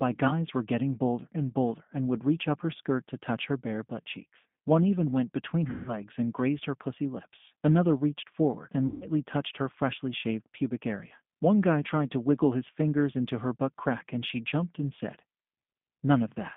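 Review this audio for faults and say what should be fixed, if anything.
The whole clip carries G.729 codec damage: the band stops near 150 Hz and 3.5 kHz, and the speech sounds rough and slightly synthetic from being rebuilt at 8 kbit/s out of a vocal tract filter, pitch predictor and sparse pulses. Using a wideband codec such as G.722 or Opus would prevent this.

VoIP packet loss concealed by the speech codec occurs at 5.70–5.95 s and 8.87–9.08 s. About 170 ms and 140 ms of audio are missing. The decoder stretches the last pitch and filter into a fading buzzy tone or coloured noise, and weak or distorted speech lingers afterward. Adding jitter buffering, FEC or a less lossy network path would prevent it.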